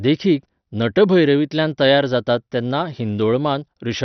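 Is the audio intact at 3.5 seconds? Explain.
No. At 3.5 seconds, as throughout, the speech sounds dull and gurgling, with nothing above 6.2 kHz. This is likely heavy MP2 compression, fitting about 48 kbps. Starved upper sub-bands are switched off and the rest are coarsely quantised, leaving granular distortion.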